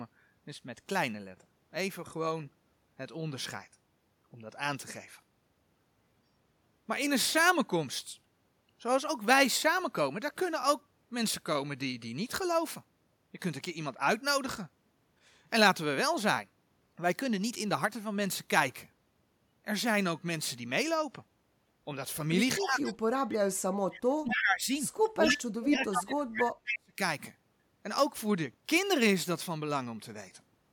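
From 22.58 to 22.97 s, 23.51 to 24.70 s and 25.14 to 26.99 s the speech dips by up to about 15, 40 and 40 dB. This is likely speech suppressed in double talk, the echo canceller ducking the talker. The waveform shows sunken envelopes, and the spectrogram shows faded bands. Within and between these spans, brief echo leaks at 24.30–24.42, 25.01–25.10, 25.29–25.37 and 26.69–26.79 s are likely loudspeaker pickup returning 251 ms late. They sit about 5 dB below the speech, except about 30 dB below at 25.01 s, and show as delayed, repeated spectral streaks.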